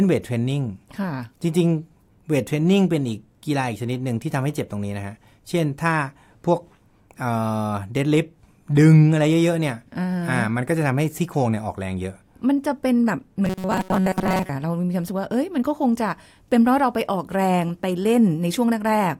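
Robotic sound from repeated short buffers hits this speech clip from 13.45 to 14.50 s: most of that stretch becomes a rigid metallic buzz near 188 Hz. The likely cause is audio arriving too seldom, with a roughly 5 ms fragment replayed to fill gaps.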